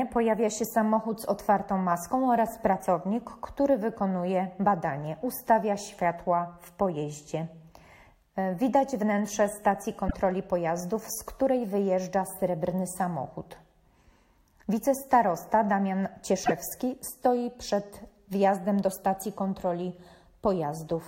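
Corrupted data in the compressed stream made the decoder misread frames and lose sync, producing brief glitches from 10.05 to 10.14 s and 16.41 to 16.52 s.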